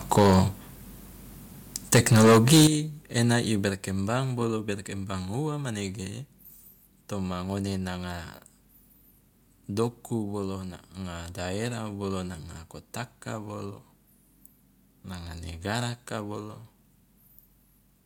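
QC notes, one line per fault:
0.12–0.4 s, microphone overload: the loudest speech takes on a harsh, crackly edge with flattened peaks. The input likely ran about 9 dB past the converter's ceiling, so around a sixth of the samples have their tops sheared off.
0.19 s, microphone volume stepped down: in the middle of that distorted burst, speech and background drop together by about 3 dB in a single step. This is likely the call software reacting to the clipping by lowering the device's input gain at once.
1.75–2.67 s, microphone overload: this is a longer, rougher stretch of crackling distortion leading into "ena i". The input likely sat about 12 dB over full scale, clipping roughly a fifth of the samples and squaring off the waveform's peaks.
2.67, 3.69 and 4.71 s, microphone volume stepped down: the level falls abruptly by about 11 dB right after the second overload, then by about 4 dB after "ena i" and about 2 dB before "berkembang ua manege". 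These are likely successive automatic cuts to the input gain, each one instant rather than faded.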